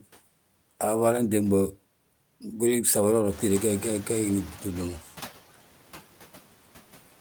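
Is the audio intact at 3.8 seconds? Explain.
No. At 3.8 s the noise suppressor is catching up, from 3.30 to 5.03 s. The room noise jumps by about 13 dB around three and a half seconds. The suppressor's noise estimate lags that jump, so over roughly 1.7 s the louder background leaks through with only about 8 dB of reduction before it sinks as the estimate adapts. Noise suppressor artifacts are also present here, as across the whole recording. The suppressor pulls down, frame by frame, every band it judges to be steady noise, by about 12 dB, so the remaining background dips between phrases and swells beneath the speech.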